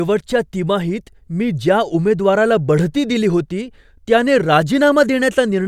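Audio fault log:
Nothing to log here, the speech comes through without a single fault worth noting.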